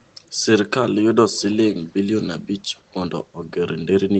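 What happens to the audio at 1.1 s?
Nothing goes wrong at 1.1 s: the speech carries straight through that moment, with only the steady band-limited sound of the call codec, which cuts off the highs around 8 kHz, and no dropout, glitch or distortion.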